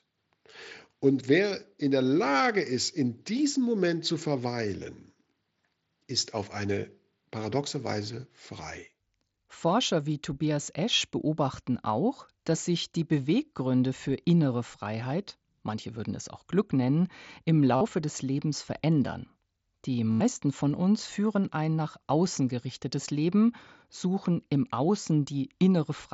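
Concealed Bluetooth headset packet loss at 17.76 s (45 ms) and 20.11 s (90 ms) fills each gap with repeated waveform. It sounds like a full-level buzzy tone that warbles on recovery, not a silent dropout.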